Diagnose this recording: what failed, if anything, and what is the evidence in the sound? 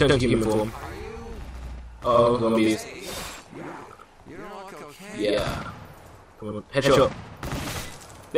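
Every event in the sound is followed by a second, equally loud copy about 85 ms later, from start to finish, giving a doubled, slapback quality. This is channel delay (doubling) at the driver or buffer stage: one channel arrives late by a fixed buffer's worth of samples, which fits a 4096-sample buffer, and when the two channels are summed to mono the late copy sits far enough behind to be heard as a separate echo.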